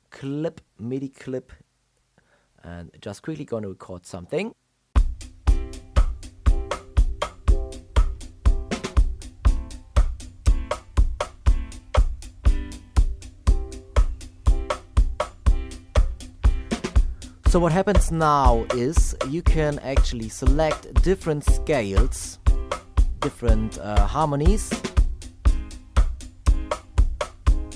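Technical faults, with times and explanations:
No technical faults can be heard in this clip. There is nothing here that needs a time or an explanation.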